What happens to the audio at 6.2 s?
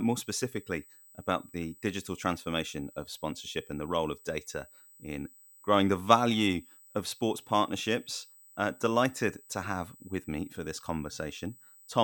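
At 6.2 s the speech carries USB whine, present throughout the clip rather than starting there. Current drawn in 125-microsecond USB microframes leaks through power or ground, producing a fixed 8 kHz whine with its strongest component at 16 kHz, roughly 25 dB below the speech.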